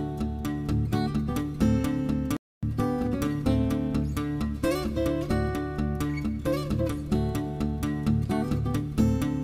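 At 2.37 s the sound cuts to silence for 0.26 s, then resumes: a playback stall, likely the player starving for data, unlike a dropout's shorter gap.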